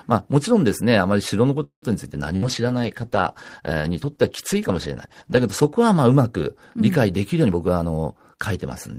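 From 1.63 to 1.85 s the speech stops and the last sound is drawn out as a fading buzz or hiss that falls to silence for about 100 ms before the voice picks up where it left off. Nothing is lost, but about 0.19 s of delay is inserted. This is a call audio freeze, likely caused by delayed packets draining the jitter buffer.

At 2.11 s the speech turns rougher and more muffled, with the top end dulled, and stays that way until 5.84 s. This is a call bitrate drop. The encoder fell from 32 to 14 kbps and sat at the lowest rate for about 3.6 s, so it coded the speech coarsely and trimmed the high frequencies.

Inside that stretch, from 2.36 to 2.45 s, comes a burst of packet loss. The sound briefly turns into a held, dimming buzz or hiss for about 55 ms, then jumps ahead. About 60 ms of speech is gone because the receiver could only stretch the last sound over packets that never arrived.

From 7.43 to 8.30 s the speech sounds hurried but keeps its pitch, running at about 119% speed. 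This is a jitter buffer speed-up. With too much audio queued, the receiver cut many tiny pitch-period slices, about a fifth of a second in total, to bring the delay back down.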